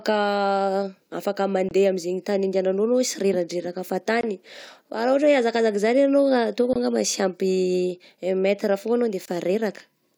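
The speech was delivered in chunks of about 2.5 s, and each join leaves a gap between chunks of about 23 ms of dead silence, likely from padding or late playback of the next chunk. Nothing is lost, but the sound is interrupted at 1.69–1.71 s (before "amin'izegny tany handehananao"), at 4.21–4.23 s, at 6.73–6.76 s (between "anao ataoko" and "angamba sy ampy"), and at 9.26–9.28 s (after "metre foagna anao de").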